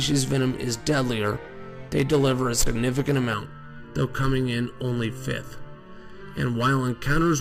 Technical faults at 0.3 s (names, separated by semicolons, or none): none